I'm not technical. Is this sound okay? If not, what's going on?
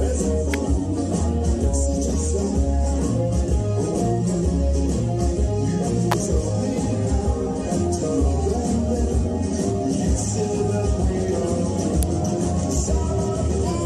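No. There are three sharp snaps laid on top of the sound, at about 0.54, 6.12 and 12.03 seconds. Each is over in a split second. They are electrical switching spikes. The likely cause is a nearby switch, motor or static discharge arcing briefly, with the audio line picking up that burst. The first snap is a bit quieter. The later two are louder.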